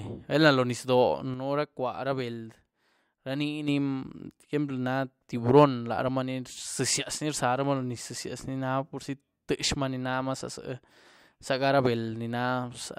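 A speech clip with a sudden gain jump: at 1.34 s the level drops by about 6 dB in one step, returning at 3.68 s, likely from a digital gain change applied without a ramp. Unlike a fade or compressor action, speech and background noise shift together instantly.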